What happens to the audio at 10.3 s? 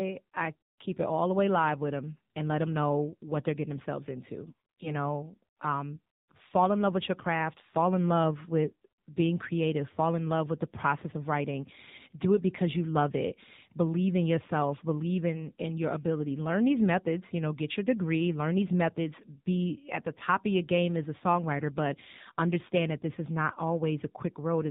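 The AMR narrowband mobile codec runs through the whole clip, including 10.3 s: the speech has nothing above 4 kHz and sounds plainly buzzy and synthetic, consistent with a low mode around 7.4 kbps.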